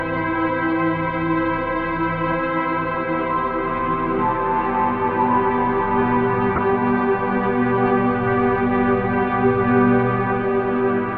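The whole clip sounds dull and granular, with a gurgling edge and missing top end. That's likely MP2 compression starved of bits, around 80 kbps, switching off upper sub-bands. From 6.56 to 6.73 s there's DAB burbling: bit errors corrupt the MP2 data, putting short blips of noise in single sub-bands, giving a brief burst of noise blips.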